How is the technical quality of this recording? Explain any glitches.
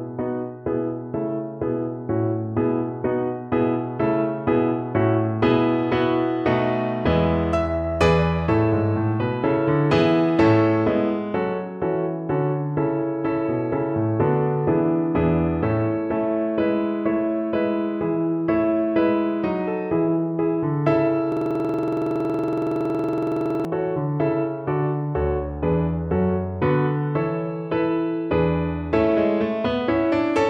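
The recording has one serious glitch, a system hang loop from 21.32 to 23.65 s. For about 2.3 seconds the audio collapses into a rapid, rattling stutter at 21.5 Hz as one 46.44 ms fragment repeats exactly, 50 times in a row. The computer or its audio driver froze while the sound hardware kept playing the same ring buffer over and over. The loop length fits a 2048-sample buffer.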